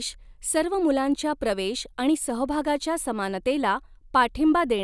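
No technical faults can be heard anywhere in this speech.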